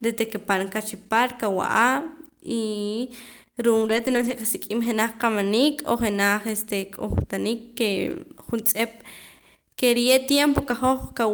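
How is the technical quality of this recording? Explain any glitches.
The speech has three short rough patches where lost packets were rebuilt from error correction, at 3.81 to 4.31 s, 4.83 to 4.85 s, and 10.53 to 10.71 s. Each time, the next packet carried a low-bitrate backup of the missing audio, and the decoder played that instead of leaving a gap. So nothing drops out, but those stretches sound grainier and noisier. The first, longest one points to a run of lost packets.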